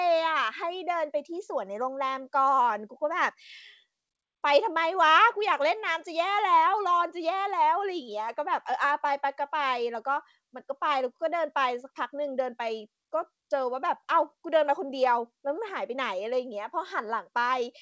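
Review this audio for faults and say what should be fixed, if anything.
Nothing stood out on listening to this speech, which carries the expected sound of a WebRTC call path using G.722 at 64 kbps with nothing above 8 kHz, so there is nothing here that needs fixing.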